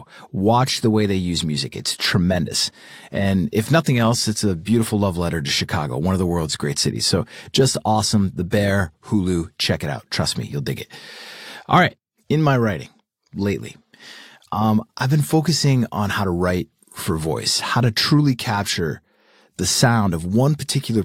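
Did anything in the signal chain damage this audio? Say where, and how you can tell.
No, no damage is audible.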